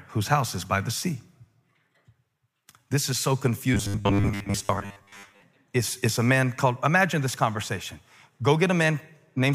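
Robotic sound from repeated short buffers runs from 3.74 to 5.42 s, just after "is so". The speech becomes a rigid metallic buzz fixed at 100 Hz, likely because playback kept looping a 10 ms slice for most of that span as new audio lagged.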